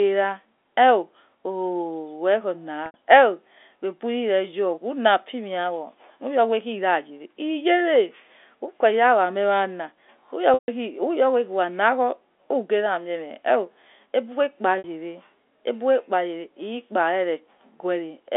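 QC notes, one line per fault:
2.86 s, 10.54 s, 14.78 s: packet loss with pitch repetition. Gaps of 80 ms and 60 ms sound like a briefly held, buzzy tone. The 140 ms gap fades to silence. The receiver looped the last pitch period to cover lost packets.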